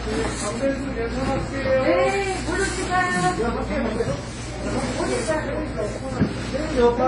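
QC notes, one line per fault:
Throughout, WMA compression: nothing sounds above 10.1 kHz, and heavy damage leaves ringing, washy smearing with hiss breathing alongside the sound, likely an early WMA encoder near 24 kbps. A spectrogram shows a hard ceiling and blotchy, gapped time-frequency patches.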